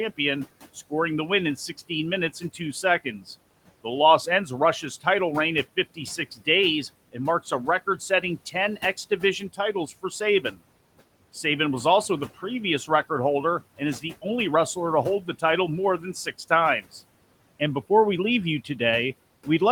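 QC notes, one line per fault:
1.89–3.23 s, 5.76–6.47 s, 7.13–10.58 s, 13.78–14.25 s, 15.23–15.43 s: speech cut by the noise suppressor. It mistook brief soft bits of speech for the room noise and ducked them by about 10 to 15 dB, so they sound swallowed.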